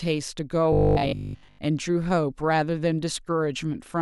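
Robotic sound from repeated short buffers, 0.73 to 1.59 s: the speech becomes a rigid, metallic 50 Hz buzz, likely from a 20 ms buffer being replayed for most of that stretch.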